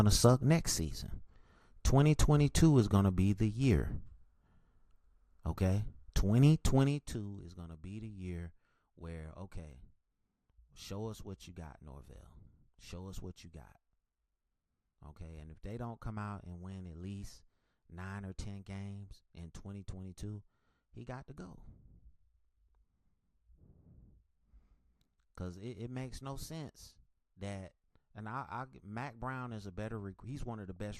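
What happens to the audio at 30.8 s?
A few watery blips come at 30.76 s, short bursts of noise in single sub-bands. That is DAB burbling. Bit errors slip past the receiver's error correction into the MP2 data, so corrupted samples briefly put noise into individual bands before the next clean frame restores them. The error rate implied is low, only a small fraction of bits, which is why the damage is a few brief blips rather than sustained mud.

Underneath, the speech carries plainly audible MP2 compression: a dull top end with a granular, gurgling texture as upper sub-bands flicker on and off and the remaining ones are coarsely quantised. The likely cause is a low bitrate of around 80 kbps, too few bits for Layer II to keep all 32 sub-bands active.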